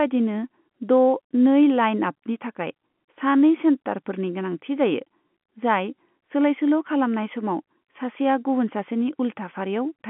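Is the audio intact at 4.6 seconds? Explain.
Yes, the audio is intact at 4.6 seconds, with the speech carried cleanly through the narrow band of the G.711 telephone coding and nothing breaking into it at that moment.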